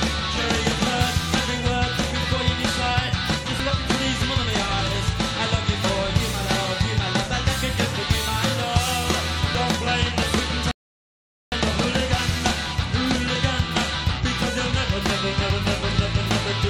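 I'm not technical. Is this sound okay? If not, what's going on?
No. At 3.60, 9.55 and 15.50 seconds the sound skips forward, losing roughly a twentieth of a second each time. The regular six-second spacing points to audio missing between chunks: the recording was likely made in pieces, and a sliver dropped at each join.

At 10.71 seconds the sound stops dead and goes silent until 11.52 seconds, then carries on exactly where it left off. That is a rebuffering stall: playback ran out of downloaded audio and paused, adding about 0.8 seconds without losing anything.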